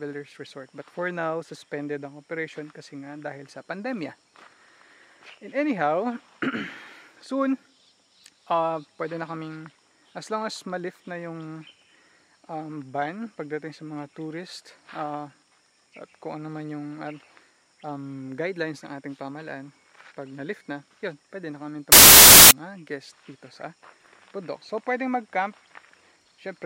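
Right around 21.92 s the audio suddenly turns into a burst of loud, harsh broadband noise that lasts until 22.51 s, a bit over half a second. That's samples built from the wrong bytes. The reader lost track of how each sample's bytes fit together, maybe slipping by a byte or swapping their order, so the jittery low-order bits ended up as the big part of every value and the real waveform got buried in noise.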